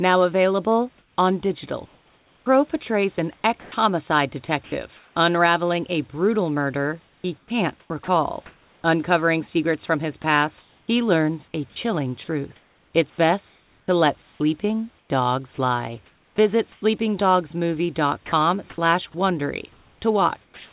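Between 0.98 and 5.16 s, 7.06 and 16.82 s, and 18.26 and 19.14 s, the sound is chopped by the voice detector, likely because the sender kept toggling transmission on and off. About 1.3 s, 2.8 s and 0.16 s respectively are swapped for synthetic fill, so syllable edges drop out.

From 20.44 s to the end, comfort noise replaces the background, likely because the sender stopped transmitting in the pause. A flat, featureless hiss about 2 dB quieter stands in for the real room sound, within the 4 kHz band of the narrowband call path.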